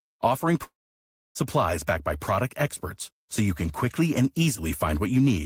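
At 0.63 s the speech cuts off. A brief fading buzz trails the last sound, then silence holds until 1.37 s. Speech resumes with about 0.72 s missing. This is likely a long network dropout, where the concealment ran out.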